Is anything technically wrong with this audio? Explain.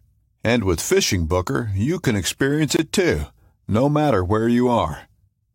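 Yes, there's one problem. At 2.77 to 2.79 s there's a gap at a join of encoded pieces: separately encoded chunks were spliced untrimmed, leaving a 23 ms gap with smeared edges before the speech picks up where it stopped.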